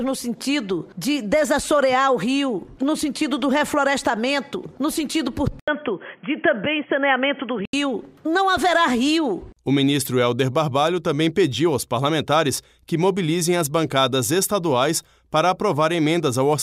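The recording input likely switched to a poorer device at 5.60 s, probably another microphone or a headset's call profile, and came back at 7.73 s. An 80 ms silence marks the changeover. Until 7.73 s nothing above 3.3 kHz gets through, so the sound turns dull and boxy. A faint new background noise sits well beneath the signal, while loudness stays about the same. The full, clearer sound returns at 7.73 s.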